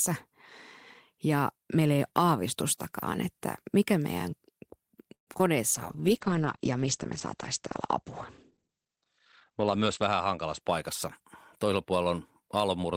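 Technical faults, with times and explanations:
5.14 to 5.28 s, call audio freeze: the speech stops dead for about 0.13 s, with the last sound carried on briefly before roughly 0.1 s of silence, then it resumes exactly where it left off with nothing lost. That pattern of a gap inserted rather than audio removed likely comes from packets being held up in transit, so the jitter buffer emptied and the receiver had to stretch what it had until delivery caught up.
5.33 s and 5.38 to 5.40 s, short concealed packet loss: two tiny blips right after the freeze, heard as a quick smear or wobble in the speech. Around 30 ms and then 20 ms of audio never reached the decoder in time, and the receiver patched each hole by extending the preceding sound, voiced or noisy, for a few milliseconds before blending back into real audio. Any brief consonant falling in those holes can simply vanish.
5.75 to 10.66 s, call bitrate drop: the voice turns duller and rough, losing its top end for most of this stretch. 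The encoder was pushed from 32 kbps down to 13 kbps, holding the lowest rate for about 4.25 s, and at that rate the coded bandwidth narrows from 20 kHz to 8 kHz, so the upper part of sibilance and the air are lost and the coarser coding adds a watery grain until the rate climbs back.
5.96 to 6.34 s, jitter buffer slow-down: the speech drags a little here, running at 92 % speed with its pitch unchanged, so sounds feel drawn out. Just after the disruption the buffer was rebuilding its reserve, and the receiver did so by repeating single pitch periods over and over, adding 36 ms of audio in total to this short stretch.
11.64 to 12.66 s, jitter buffer speed-up: the speech near the end sounds hurried, running at 110 % speed at the same pitch. The buffer was holding more audio than its target, so the receiver trimmed short pieces of a pitch period or so, again and again, removing around a tenth of a second across this second-long span to pull the delay back down.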